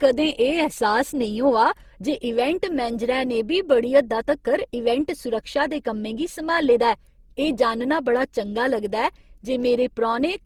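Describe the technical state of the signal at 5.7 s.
At 5.7 s the speech carries generation loss throughout, likely from around ten passes through an Opus-like codec near 64 kbit/s, so the swirl, hollowness and blurred attacks exceed a single low-bitrate encode.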